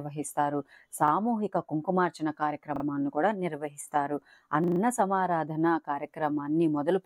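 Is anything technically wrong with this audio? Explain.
Yes. Short stutters at 1.08 s, 2.76 s and 4.64 to 4.8 s, each a 40 ms piece of sound replayed with hard joins (once, twice, then four times), are a repeated buffer: late audio made the device replay its last block, with seemingly nothing lost.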